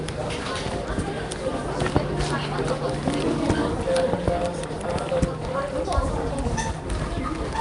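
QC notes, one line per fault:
Throughout: nothing above 10.6 kHz, with a rough, hissy halo and a smeared, watery quality everywhere. It's likely Nellymoser compression, probably near 44 kbps, where a fixed two bits a sample leave weak bands empty and fill them with noise.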